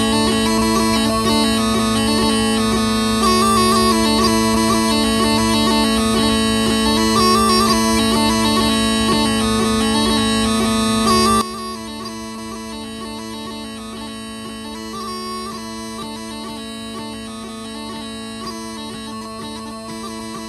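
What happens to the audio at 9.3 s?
Nothing goes wrong at 9.3 s; the audio plays through that moment intact, with no dropout, click or other fault.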